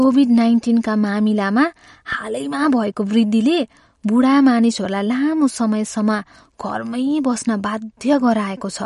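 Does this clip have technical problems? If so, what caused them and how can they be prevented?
Yes: throughout, the speech sounds watery and swirly, with nothing above 11.2 kHz, a flat ceiling on a spectrogram. Likely MP3 compression, at a low rate around 48 kbps. Prevent it by encoding at a higher bitrate or using lossless files.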